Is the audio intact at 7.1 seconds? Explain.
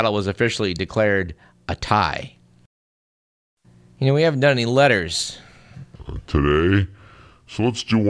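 No. From 5.96 s, just after "haven't done any letters", to the end of the clip, the speech has a wrong sample rate fault. It is played back at about 0.69 times its proper speed, which fits audio recorded at 32 kHz but played at 22 kHz with no conversion. Pitch drops about 6.5 semitones, so the voice sounds low, slow and dragging. On a spectrogram, harmonics and formants sit lower and closer together. The waveform's syllables look stretched out.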